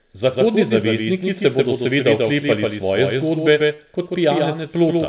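Throughout the speech, a doubled audio track runs underneath: a second full-band copy trails the original by about 150 ms, roughly 5 dB quieter. It has no decay or room colouring, so it is not acoustic echo or reverb, which would soften and tail off. It sounds like a crisp, steady slapback on every syllable. The likely cause is the signal being captured a second time through a slower path, or an edit that kept two copies out of step.

From 3.74 to 3.80 s, just after "seveda oklepali svoje zgodbe", there is a short concealed packet loss. Roughly 40 ms of audio never reached the decoder in time. The receiver bridged most of the gap by extending the preceding sound, then blended back into the real signal. This gives a brief smeared wobble rather than the hard silence or click of a true dropout. Within that band-limited, telephone-like sound, which fits G.711 mu-law with nothing above 4 kHz, the smear is a momentary blur.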